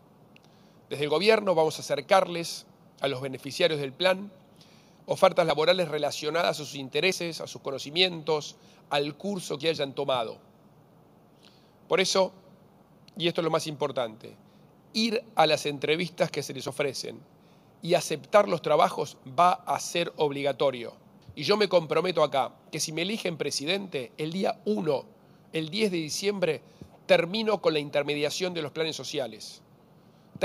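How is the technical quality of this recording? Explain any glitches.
The recording has five brief skips. At 5.5, 7.12, 16.68, 17.7 and 22.62 s, the sound jumps ahead. The likely cause is a dropped buffer (overrun): samples were overwritten before being read. Each loss is tiny, a few hundredths of a second. At 22.62 s it is longest, nearer a tenth.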